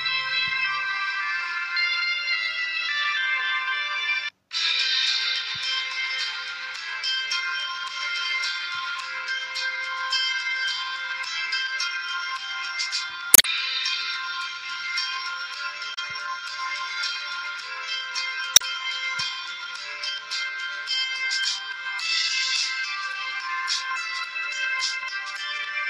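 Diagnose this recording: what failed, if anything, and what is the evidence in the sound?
The compressed stream itself failed at the codec stage: damaged data in a compressed stream left some frames unreadable, so the decoder lost sync and hunted for the next frame header. Short glitches result at 13.31–13.45 s, 15.94–15.99 s and 18.53–18.62 s.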